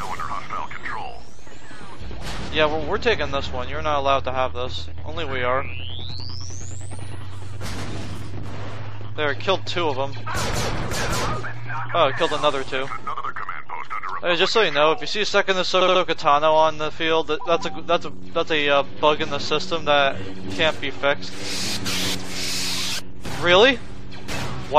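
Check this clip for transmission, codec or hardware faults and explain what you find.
The clip has repeated frames, a codec or transmission fault. A short block of sound plays again at 10.76–10.83 s and 13.18–13.25 s (70 ms, once), at 15.80–16.01 s (70 ms, three extra times), and at 22.44–22.49 s (46 ms, once). Each block's length fits two or three compressed frames being resent, which produces a stutter. Unlike a dropout, no sound goes missing: the same fragment plays again and the clip gets longer.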